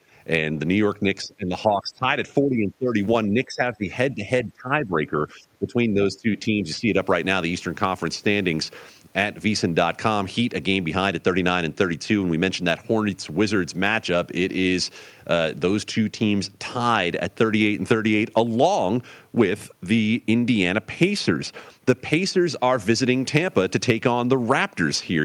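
At 0.00 to 0.13 s the background is gated by the echo canceller. The room sound ducks by about 14 dB while the loudspeaker plays, then returns.

From 1.24 s the speech dips in pieces: 1.24 to 2.07, 2.42 to 2.97, 3.27 to 3.90, 4.14 to 4.25, 4.43 to 5.16 and 5.33 to 6.95 s. The drops reach roughly 10 to 20 dB. This is likely speech suppressed in double talk, with the canceller mistaking the talker for echo.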